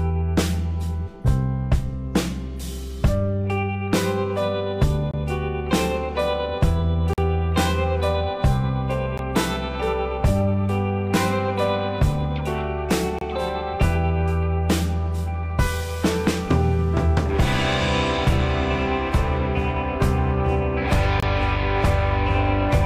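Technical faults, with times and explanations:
5.11–5.14 s, 7.13–7.18 s, 9.18 s, 13.19–13.21 s and 21.20–21.23 s: gaps between stream segments. Short holes of 16 to 45 ms cut the sound with hard edges. They fall on a 2-second grid, which fits 2-second segments. Mismatched timestamps leave spaces that the player fills with silence, while no audio is lost.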